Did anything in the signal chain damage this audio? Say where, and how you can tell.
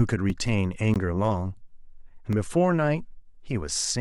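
Yes. A repeated buffer occurs at 0.30 s and again at 2.17 s, at the driver or buffer stage. Each is a tiny stutter heard as a click or brief buzz. A 5 ms slice plays twice, with a hard join. That fits a 5 ms output buffer that was replayed once when fresh audio arrived late.

A block of digital silence appears at 0.94 s, lasting 17 ms, and another at 2.33 s, lasting 2 ms. Both likely come from the same buffer stage. The speech drops straight to silence and returns without a fade. The longer one is a short hole. The shorter one is a tick. An unfilled output buffer explains both.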